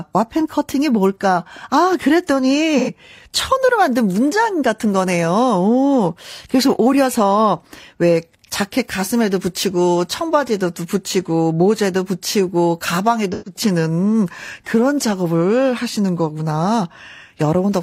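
AAC frame loss with concealment at 2.78 to 2.90 s and 13.33 to 13.60 s: the decoder patches missing frames from the last good spectrum, leaving brief smeared, noisy, phasey gaps.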